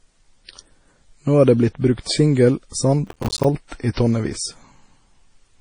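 From the start and throughout the speech, the sound has a dull top with nothing above 9.8 kHz, and two kinds of coding damage overlap: smeared, swirly transients alongside a separate metallic, warbling texture. The likely cause is transcoding between lossy codecs, which fits an MP3 at around 32 kbit/s re-encoded to AAC-LC at a similar rate. The second encoder spent its limited bits reproducing the first one's artefacts, added its own, and kept the low cut-off.

From 3.07 to 3.45 s, a gritty, rapid crackle tears across the speech. This is processor overload crackle. The processor fell behind and missed dozens of playback deadlines again and again over that stretch, and each missed buffer came out as a short hole of silence with hard edges. The spacing of the clicks fits buffers of around 5 ms. The tearing ends at 3.45 s, when the load eases.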